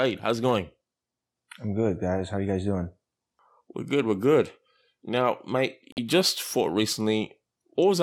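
At 5.92 s the speech drops into a 60 ms corrupt frame muted gap, ending at 5.98 s: damaged compressed data was rejected by the decoder and replaced with silence, a length that fits two codec frames. The waveform shows an abrupt flat line, the spectrogram a clean vertical blank band, with timing intact.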